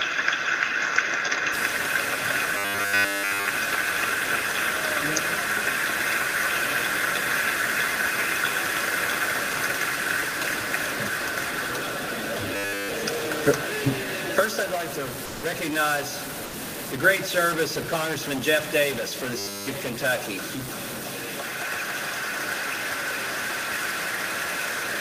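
From 1.54 s to the end, a distortion rides on the audio and pauses fill with noise, likely a stuck bit; unlike clipping, it persists even when the sound is quiet. At 2.57 to 3.49 s, 12.56 to 12.89 s and 19.38 to 19.68 s, the sound becomes robotic from repeated short buffers, a rigid metallic buzz at a fixed 100 Hz that fits 10 ms repeats. Almost nothing new comes through, which sets it apart from ordinary jitter. At 15.27 to 15.43 s (160 ms) and 16.47 to 16.51 s (40 ms), the sound is dropped by the voice detector and replaced by steady comfort noise, likely from discontinuous transmission such as Opus DTX. These gaps carry no repetition buzz, which distinguishes them from the repetition faults.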